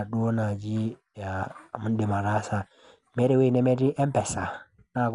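Dull and band-limited from start to finish, the speech has nothing above about 11.4 kHz, and a rough, fluttering grain clings to voiced sounds throughout. The damage is plainly audible. The likely cause is Dolby Digital compression at a low rate, which fits roughly 64 kbps: the encoder cut the top of the band and left many frequency lines without mantissa bits, so the decoder filled them with dither noise that flutters around the harmonics.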